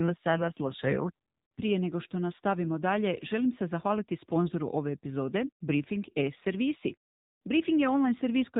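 From start to finish the speech carries AMR narrowband mobile codec damage: nothing above 4 kHz survives, so it sounds dull and phone-like, and the low bit budget, which fits AMR-NB at around 7.4 kbps, leaves the vocal-tract model audibly buzzy and synthetic throughout.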